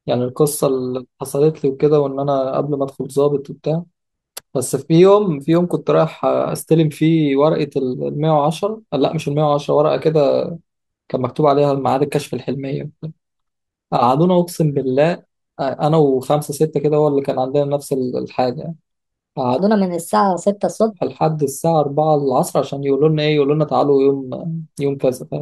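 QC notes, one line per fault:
19.59 to 20.92 s: section at the wrong speed. Speech runs 1.25 times fast and pitch rises about four semitones together, likely from playback against a mismatched clock.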